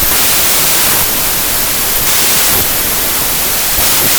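Speech throughout shows wrong sample width: 32-bit samples read as packed 24-bit turn into loud noise with slowed, lowered speech at 0.75 speed. Unlike byte-order errors, speed changes.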